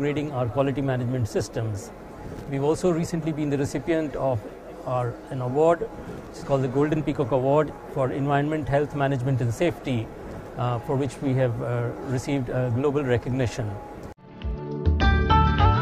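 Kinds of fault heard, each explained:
No dropouts, clipping, glitches or other faults can be heard anywhere in the signal.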